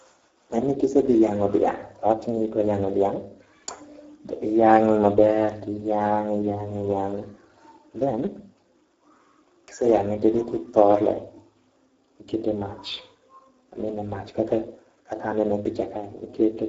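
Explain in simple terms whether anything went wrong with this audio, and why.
The whole recording shows Speex codec damage: squeezed hard to save space, the speech sounds rough and hoarse, with nothing crisp above about 7.7 kHz.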